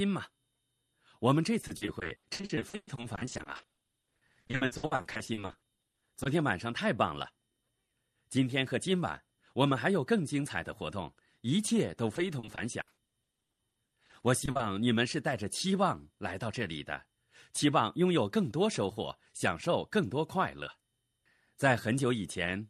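Repeated packet loss (robotic sound) runs from 1.61 to 6.27 s and again from 12.15 to 14.61 s. Dozens of gaps, up to 120 ms and 80 ms long, are patched by extending the preceding sound, covering about 43% and 31% of each stretch and making the speech choppy with pieces missing.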